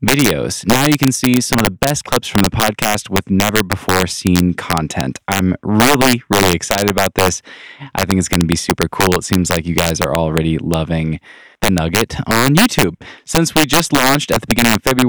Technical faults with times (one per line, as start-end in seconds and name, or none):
0.00-15.09 integer overflow